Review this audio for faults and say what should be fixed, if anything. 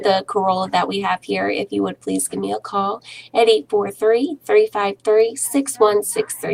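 There's a short burst of CD scratch ticks between 4.87 and 5.21 s: three evenly spaced clicks, each well under a millisecond. A blemish on the disc passes the laser once per revolution and corrupts more data than error correction can rebuild, so the player patches those samples. Re-rip from a cleaned or polished disc, or use a secure-ripping drive that rereads bad sectors.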